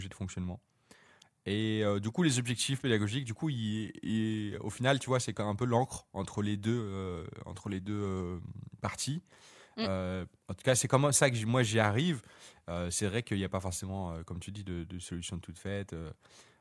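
Nothing stood out on listening to this speech recording.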